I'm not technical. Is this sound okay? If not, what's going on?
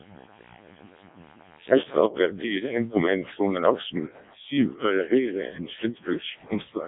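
No. The whole recording went through the Codec 2 vocoder, which rebuilds speech from tones. It sounds robotic and buzzy, with nothing above 3.8 kHz.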